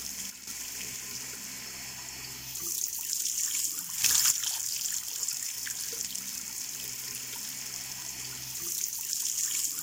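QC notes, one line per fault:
0.30–0.47 s, sudden gain jump: sound and background noise drop together by about 8 dB in a single step, with no fade, so the level change is abrupt.
4.04–4.31 s, sudden gain jump: level rises by about 9 dB in one step, likely a digital gain setting applied from one sample to the next without a ramp.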